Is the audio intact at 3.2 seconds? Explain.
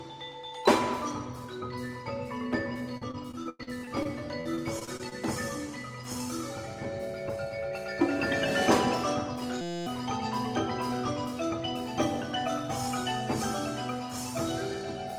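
No, repeated packet loss (robotic sound) runs from 2.97 to 5.13 s: over a dozen dropouts up to 97 ms, each patched by extending prior sound, leaving choppy audio with pieces missing.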